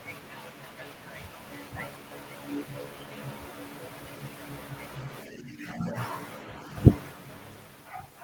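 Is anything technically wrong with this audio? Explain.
Yes. From 5.26 s to 5.96 s the speech is suppressed in double talk. The level sinks by roughly 10 dB for about 0.7 s and then comes back. The likely cause is an echo canceller that met overlapping talk from the far end. It could not tell the local talker apart from the loudspeaker echo, so it pulled everything down together. What you hear is the voice briefly thinning and ducking, then recovering once the overlap ends.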